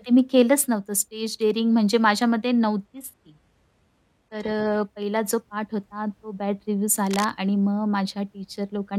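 From 2.85 s to 4.85 s the speech abruptly loses its top end and takes on a thin quality, with nothing left above about 12.3 kHz, then snaps back with no gap at either edge. This is an adaptive stream at a lower bitrate: the connection slowed, so the player switched to a much cheaper encoding for two seconds. The sound points to a move from roughly 96 kbit/s AAC down to something like 16 kbit/s HE-AAC.

At 7.11 s a burst of dense, uneven scratching and rustling runs over the speech for about 0.15 s, ending by 7.26 s. It is about 10 dB quieter than the speech itself. This is cable scratch noise, likely from a worn cable, connector or control being moved so that its contact resistance jittered rapidly and fed crackly noise into the signal.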